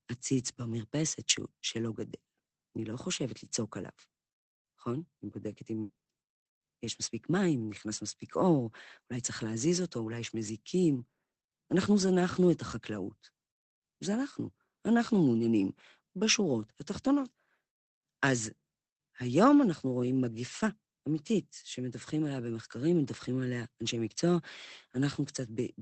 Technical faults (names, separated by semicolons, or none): repeated packet loss (robotic sound); lost packet rebuilt from error correction